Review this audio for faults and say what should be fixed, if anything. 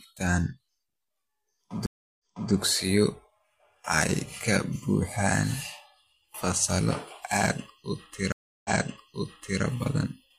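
Stream reconnects at 1.86–2.52 s and 8.32–9.62 s: the connection dropped, the player went silent (0.33 s, then 0.32 s after "fasallo aad u"), reconnected and started a fresh decoder mid-stream. Because the server resent a burst of buffered audio, the speech resumes earlier than where it broke, repeating 0.33 s the first time and 0.98 s the second. To prevent this, stabilise the connection and have the player resume from the exact break point rather than the server's burst start.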